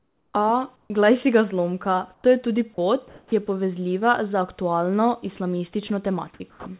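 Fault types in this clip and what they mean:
comfort noise in place of the background: Between phrases, the real room background gives way to a steady, featureless hiss. This happens from 0 to 0.34 s, from 0.76 to 0.9 s just before "glej si ga zlomka", from 2.14 to 2.24 s, and from 3.08 to 3.32 s between "zlomka to je tudi" and "je povezljiva". The fill is about 12 dB quieter in the first gap and about 7 dB quieter in the second, and level-matched in the others. It is likely synthetic noise played during transmission pauses.
sound dropped by the voice detector: Brief pieces of speech vanish into the same steady noise. The first is from 2.74 to 2.78 s, right after "zlomka to je tudi", where about 20 ms of sound goes missing. The second is from 5.88 to 5.9 s, where another 20 ms disappears. Each time, the speech returns a moment later. The likely cause is a voice detector that mistook part of the speech for background and stopped sending.
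onset clipped by the voice detector: At 3.28 to 3.32 s, the speech that resumes after the pause starts abruptly. It lacks its soft beginning. About 40 ms of the start is replaced by noise. This likely comes from a voice detector that was slow to notice the sound starting again, so the opening moment was never sent.
sound chopped by the voice detector: From 6.34 to 6.66 s, the speech turns choppy. About 220 ms in all is swapped for fill noise in two or more pieces. The likely cause is a detector switching between sending and pausing more than once in this short stretch. All of this sits within a band that ends at 4 kHz, which fits a narrowband call codec.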